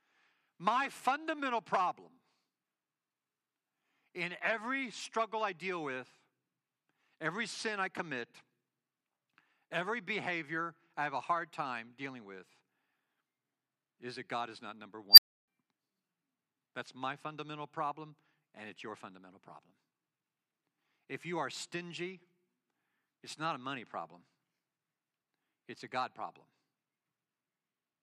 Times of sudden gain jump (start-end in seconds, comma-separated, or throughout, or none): none